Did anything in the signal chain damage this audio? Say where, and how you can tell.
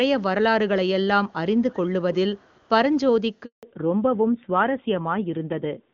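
Yes. At the call-processing stage, faint delayed copies of the speech appear at 1.7 to 1.77 s and 2.35 to 2.68 s, trailing by 332 ms and sitting very low, around 30 and 40 dB down. This is echo leak, likely from a far-end loudspeaker whose echo canceller let residue through. Room reverberation would not arrive this late as separate scraps.

At the network stage there is a handover gap from 3.45 to 3.63 s. The speech fades within tens of milliseconds into 180 ms of silence while the call switches links. Unlike a dropout, which is brief and followed by continuous sound, the audio that follows comes back changed.

At the codec stage, from 3.63 s to the end, the call falls back to narrowband. Until then the HD Voice codec carries content up to about 7 kHz. After the switch nothing remains above 4 kHz, and the speech turns dull and rough, which fits AMR-NB at 7.4 kbit/s. Gradual high-frequency loss from a filter would not begin with a gap like this one.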